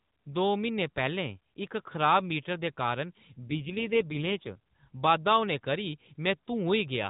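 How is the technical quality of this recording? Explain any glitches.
The recording is narrowband mobile speech with one glitch.

AMR rate drop, from 3.44 to 4.58 s: for a little over a second the speech turns rougher, buzzier and more synthetic, then returns to its earlier texture. The bandwidth stays the same and there is no gap. This is what happens when a weak radio link makes the network push the AMR codec to a lower mode and spend the freed bits on error protection. The sound fits a step down from 12.2 to 5.9 kbps. With fewer bits for each frame, the vocal-tract model gets fewer pulses to work with, which causes the coarser, artificial quality. Around this passage the AMR narrowband mobile codec caps everything at 4 kHz and leaves only light coding roughness.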